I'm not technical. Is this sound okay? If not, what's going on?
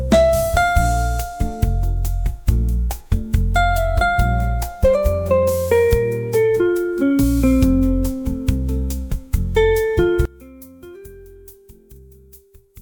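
No. From 10.25 s until the end, the sound suddenly becomes very faint. The likely cause is one channel inverted: one side of the stereo is flipped upside down, so when both sides are combined, most of the sound cancels out.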